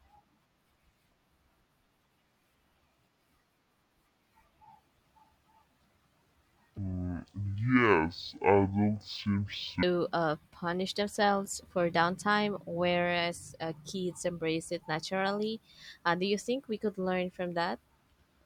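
From 6.78 to 9.83 s the speech turns slow and deep. This is stereo read as mono. The left and right samples, which alternate in the stream, are taken in turn as one channel. Each stereo frame becomes two mono samples, so the audio runs at half speed and drops a full octave, 12 semitones. The voice drags and sounds heavy. A faint mirrored copy of the sound also shows up in the upper half of the spectrum.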